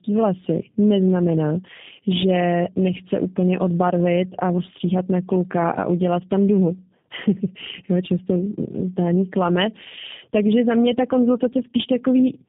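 From start to finish the speech carries tandem speech coding: it was squeezed through a low-rate coder, decoded, and coded again, so the second pass worked on already damaged sound. The result is rougher, more muffled and more warbly than one codec alone. The sound fits two passes through an 8 kbit/s G.729A-type coder with a G.711 link between them, and nothing is heard above 3.7 kHz. Plain band-limiting would dull the top without adding the doubled roughness and warble.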